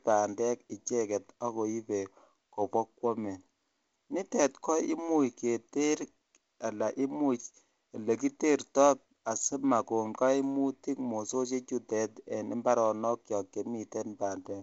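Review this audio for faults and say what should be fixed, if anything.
Nothing needs fixing: the speech carries the band limit of G.722 wideband telephone coding, with nothing above 7.7 kHz and the light coder grain expected at what sounds like its 48 kbit/s mode.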